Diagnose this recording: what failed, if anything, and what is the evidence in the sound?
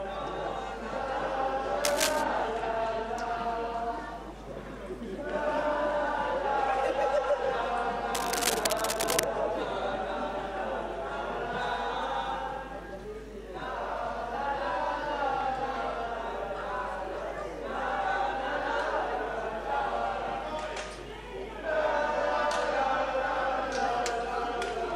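Cable scratch noise appears twice: 1.84 to 2.25 s and 8.15 to 9.24 s. Dense, uneven scratching bursts sit over the sound at about equal level. The stage is analogue wiring. A worn cable or connector was likely moved, shifting its contact resistance.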